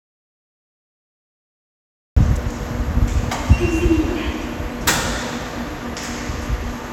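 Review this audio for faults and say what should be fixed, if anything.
Audio dropout to silence from 0.0 to 2.17 s: the clip opens in silence with no room tone, likely because the input was lost while recording continued.

To prevent it, check connections and mute states and confirm the input is live before recording starts.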